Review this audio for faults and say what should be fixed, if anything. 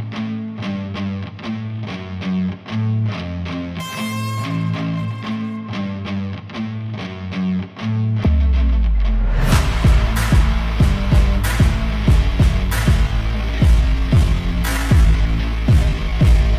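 From 12.93 s to the end, a time-stretched section slows abruptly to 0.61 times speed while pitch holds. Software likely repeated short pieces to lengthen it. To prevent this, adjust the edit or timeline instead of stretching audio to fill a fixed length.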